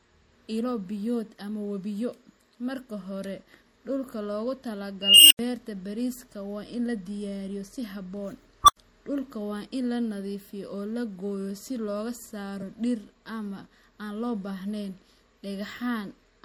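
MP3 compression runs through the whole speech clip. The sound is plainly watery and swirly, with smeared attacks and a dulled top end, which points to a low bitrate of around 64 kbps. The likely cause is an encoder short of bits cutting the treble and zeroing weak frequency lines that flicker on and off between frames.

An unstable filter appears at 5.01 s, where a squeal around 3 kHz swells over about 290 ms, clips, and then cuts to an 85 ms silence ending at 5.39 s. A second unstable filter event at 8.64 s is a shorter tone near 1 kHz that grows within about 42 ms and is followed by the same 85 ms silence, ending at 8.77 s. In both cases a recursive filter with bad coefficients fed its output back until the numbers overflowed, and it stayed silent until it reset.

Compressed frames skipped at 12.61 s. The audio jumps ahead by about 20 ms, which fits a single dropped 24 ms frame that was missing or rejected as damaged. 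Because neighbouring frames overlap, the join is a brief smeared blip, not a hard click.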